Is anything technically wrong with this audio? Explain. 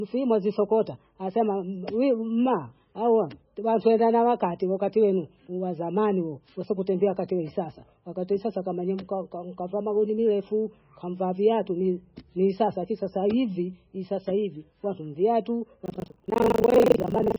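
Yes, there are two faults. Throughout the speech, the audio was likely squeezed through heavy MP3 compression at a very low bitrate, one that fits something near 16 kbps. The encoder cut the treble and dropped weaker frequency detail frame by frame, leaving dull, watery, swirling speech with smeared consonants.

From 15.84 s to the end, there is buffer tearing: the writing side and the playback side of the audio buffer drifted out of step. A bit under half of each buffer replays sound from about a tenth of a second earlier, producing a rattling 25 Hz robotic buzz over the speech.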